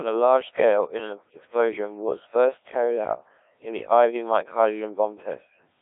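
Robotic, buzzy speech runs through the whole clip, confined to a narrow 300 Hz to 3.5 kHz line band with nothing above 3.8 kHz. This is heavy Codec 2 vocoder damage. Only pitch, voicing, energy and spectral envelope survive, resynthesised from sine waves, consistent with a very low rate around 1.3 kbit/s.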